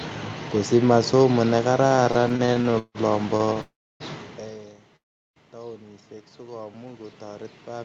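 Repeated stalls (stutter) run from 1.87 to 2.98 s. Packets kept reaching the receiver late, so its jitter buffer emptied a dozen or so times in quick succession, and each time it prolonged the last bit of speech until data arrived. About 414 ms of invented sound fills the stretch, 38% of it, with the longest hold at 162 ms. Nothing is lost, but the speech drags and catches, lurching forward in small jerks.

Three short stalls from a late packet follow: 3.37 to 3.43 s, 3.46 to 3.50 s, and 3.53 to 3.58 s. Each time one packet missed its slot, the buffer ran dry, and the receiver stretched the sound already playing, by 28 ms, then 18 ms, then 18 ms, before continuing from the same point. They come across as brief held syllables with a faint buzz or dip, clustered tightly together.

A call audio freeze lasts from 3.61 to 4.03 s. The last sound carries on briefly as a fading buzz, then drops to near silence for about 310 ms before speech resumes exactly where it stopped, adding a gap of roughly 390 ms. 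The likely cause is packets held up in transit, leaving the jitter buffer empty until they caught up. A second freeze, from 4.96 to 5.39 s, is almost entirely silent for about 390 ms of its 400 ms, again most likely from delayed packets, and again nothing is skipped afterwards.

Automatic gain rising begins at 4.40 s and continues to the end. The input had fallen by about 24 dB, around the point where the talker shifted away from the microphone near 4 s. The gain control reacted by raising its amplification step by step, so voice and room noise swell upward together over several seconds rather than jumping.

A jitter buffer slow-down spans 6.01 to 7.14 s. To rebuild its reserve, the receiver repeated single pitch cycles and slivers of pauses many times over, adding about 173 ms. Speech plays at about 85% speed with unchanged pitch, so sounds are drawn out.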